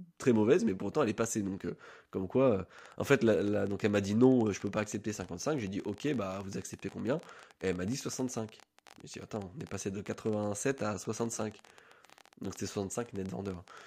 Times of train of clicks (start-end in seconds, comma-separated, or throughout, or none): 2.79-13.82